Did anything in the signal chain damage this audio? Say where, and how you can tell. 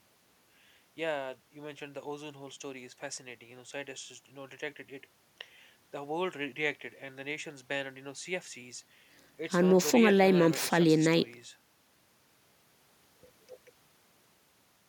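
No, nothing audible points to damage at any stage of the signal chain in this speech recording, from capture through to playback.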